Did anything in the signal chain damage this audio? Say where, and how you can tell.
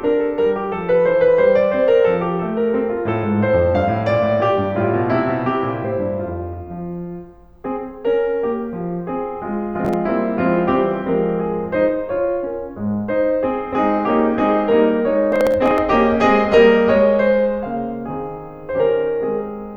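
Yes, at the driver and buffer stage: processor overload crackle at 9.85–9.94 s and, for longer, at 15.32–15.78 s. The processor missed successive buffer deadlines and skipped those buffers. The hard-edged gaps, which suggest buffers of about 5 ms, stack into gritty tearing over the music.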